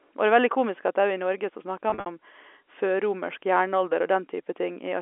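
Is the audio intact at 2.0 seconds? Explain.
No. Packet loss with pitch repetition runs from 1.90 to 2.06 s, just after "så snakker": about 120 ms of gaps, each patched by repeating the last pitch period, giving brief buzzy, held sounds.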